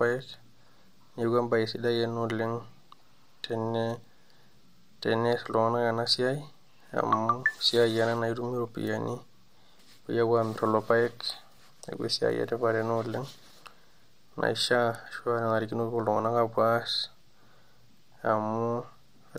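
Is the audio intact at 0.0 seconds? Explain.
Yes, the speech at 0.0 seconds is intact, with no audible dropout, click, distortion or other fault at that moment.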